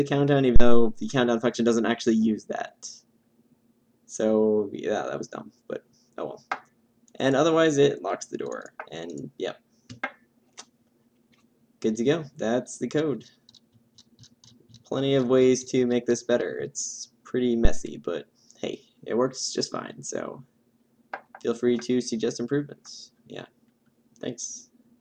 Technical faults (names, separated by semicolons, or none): phantom power thump